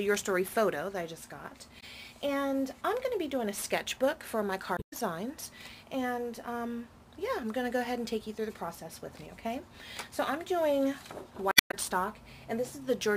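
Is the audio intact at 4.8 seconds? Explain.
No. The sound breaks up from 4.74 to 4.93 s, about 0.19 s, because of damaged data in the compressed stream. The decoder misreads the corrupted frames, loses sync and hunts for the next valid header. That gap comes out as a brief chirp, squawk, click or short hole.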